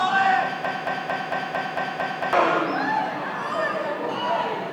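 A recording of sounds with a broken-record loop from 0.65 to 2.33 s: a 0.23 s fragment repeats seven times, likely from a stalled player or stream, showing as identical repeating blocks on a spectrogram.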